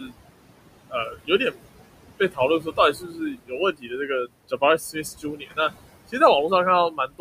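Noise suppressor artifacts run through the whole clip: the suppressor pulls down the bands it judges to be steady noise by about 21 dB, so the room noise, sitting about 13 dB below the speech, sinks in the gaps and swells under the talking.

Speech cut by the noise suppressor follows at 0–0.14 s, 0.9–1.6 s, 2.19–2.4 s, 2.6–4.1 s, 4.78–5.71 s and 6.91–7.2 s. Here the suppressor mistakes quiet speech for noise and drops it by about 15 to 20 dB, so soft consonants and word endings sound swallowed, for well over a second in all.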